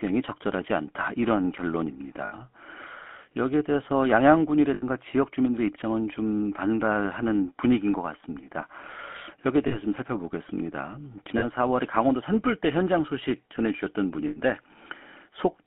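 Throughout the clip the speech carries the buzzy, gravelly roughness of the GSM full-rate codec, consistent with its 13 kbps encoding. The codec rebuilds the voice from a vocal-tract model driven by a coarse, regularly spaced pulse excitation, so fine detail in the voice is lost. The band is confined to roughly 200 Hz to 3.4 kHz, so the sound is thin and muffled, and the damage is plainly audible.

Lost GSM frames interrupt the audio at 2.26–2.33 s, 4.74–4.83 s, 9.68–9.78 s, 11.38–11.44 s and 14.28–14.38 s. In each gap the decoder reuses the parameters of the last good frame, so the speech briefly freezes into a rough, metallic ringing. The drops last 40 to 80 ms, which fits a loss of two to four 20 ms frames each. These are too short to fade fully to silence.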